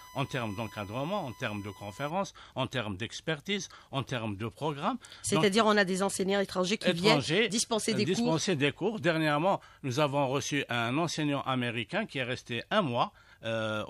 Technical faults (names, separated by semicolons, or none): USB whine